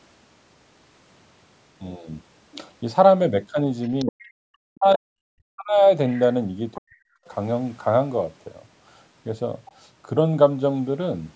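From 3.83 to 4.11 s, a second voice sits about 25 dB under the speech: the other side's voice leaking through, likely loudspeaker echo the canceller failed to remove. It returns briefly at 6.11 to 6.2 s and 6.74 to 6.8 s, the last only about 20 dB down. Unlike a suppression fault, this adds a foreign voice rather than taking anything away.

Speech suppressed in double talk follows at 4.04 to 5.13 s, 5.32 to 5.85 s and 6.77 to 7.01 s. The talker's own voice dips sharply, by about 40 dB at its deepest, likely because the canceller muted both voices while they overlapped.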